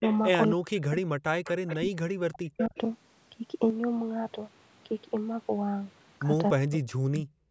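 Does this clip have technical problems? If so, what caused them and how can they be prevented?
Yes. There is echo leak at 0.01–0.19 s, 1.44–1.76 s and 2.58–2.77 s. A copy of the speech returns 269 ms late, about 15 dB down, and about 10 dB down in the last stretch. The far end's echo canceller likely missed part of its loudspeaker's sound. Using a headset there, or better echo cancellation, prevents it.

Speech suppressed in double talk occurs at 0.54–1.22 s, 1.76–2.75 s and 6.54–7.37 s. The speech dips sharply, by roughly 40 dB at worst. The likely cause is the canceller mistaking overlapping talk for echo and ducking both. Full-duplex echo cancellation, or a headset that removes the echo, avoids this.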